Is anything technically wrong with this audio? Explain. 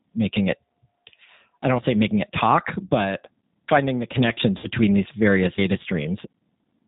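Yes. Three kinds of technical fault can be heard in this speech.

The whole clip has been through the G.729 codec at 8 kbit/s. This codec models speech with a vocal tract filter, a pitch predictor and a few pulses per short frame. It discards everything above 4 kHz. Here the damage is plainly audible. The speech sounds muffled and band-limited. It also has a rough, slightly synthetic texture, because the pulse model only approximates the real signal.

VoIP packet loss concealed by the speech codec occurs twice. The first is at 2.85 to 2.90 s, where about 40 ms of audio was lost. The second is at 4.58 to 4.67 s, with about 60 ms lost. These durations fit two and three 20 ms packets. The decoder filled each gap by extending its last pitch and filter settings at falling gain. The result is a brief buzzy, smeared sound. The speech stays weak just after each gap.

Audio missing between chunks occurs at 5.58 s. 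There is a sudden skip with no silence, as two non-adjacent pieces of sound are butted together. Roughly a tenth of a second seems to be gone. The likely cause is a recorder or processor working in 2.0 s chunks. It loses a short stretch each time it closes one chunk and opens the next.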